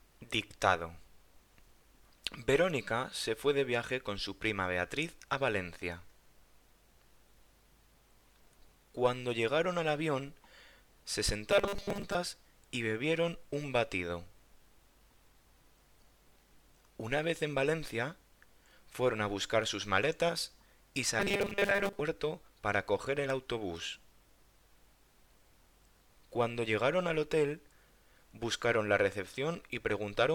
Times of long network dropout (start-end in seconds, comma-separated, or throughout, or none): none